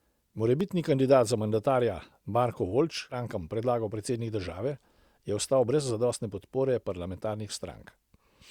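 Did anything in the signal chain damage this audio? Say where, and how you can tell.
Yes. At 0.61 s a driver or buffer fault leaves a block of digital silence, under 1 ms long. That fits a 32-sample block of zeros. The abrupt cut makes a tick.

At 3.09 to 3.15 s the speech jumps ahead with a small blip. This is likely a stream segment skipped, where the player lost one network segment and moved on.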